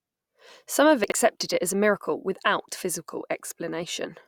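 A brief jumble from 1.04 to 1.12 s before "it as a miracle": chunks out of order, one 20 ms chunk played three late.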